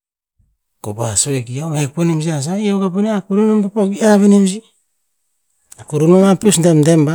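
No technical faults are audible anywhere in the speech recording.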